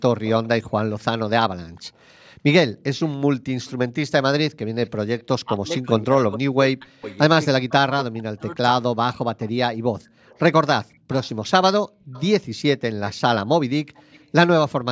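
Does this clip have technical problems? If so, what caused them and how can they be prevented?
Yes, the speech in this clip has three kinds of fault.

Echo leak: a faint copy of the speech trails the original by 282 ms at 0.24–1.8 s, 3.04–3.72 s, 4.86–5.81 s, 7.1–7.71 s and 9.14–14.26 s, sitting about 20 to 30 dB below it. The likely cause is a far-end echo canceller that let part of its loudspeaker pickup through and sent it back. On a spectrogram, each syllable's harmonic pattern reappears as a weaker ghost shifted right by about 0.28 s. A better-converged canceller, lower loudspeaker volume or a headset would prevent it.

Background gated by the echo canceller: the room sound suddenly dips at 2.34–2.45 s, by about 26 dB, and at 10.02–10.18 s, by about 30 dB, for roughly a tenth of a second and about 0.15 s respectively before it returns. The canceller pulled the microphone down hard while the loudspeaker played. 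A waveform shows the low noise floor briefly collapsing toward silence, and a spectrogram shows a short vertical gap across the background hiss. Gentler suppression with comfort-noise filling would prevent it.

Speech suppressed in double talk: between 5.44 and 8.62 s, the talker's speech dips and breaks up in pieces totalling about 2 s, dropping as deep as roughly 40 dB. This was likely the canceller failing to separate this talker from the loudspeaker echo while both sides spoke, so it attenuated both. The waveform envelope shows chunks carved out of active speech, and the spectrogram shows missing patches below the 8 kHz limit that the call processing sets. A canceller with stronger double-talk detection, or headsets to remove the echo path, would prevent it.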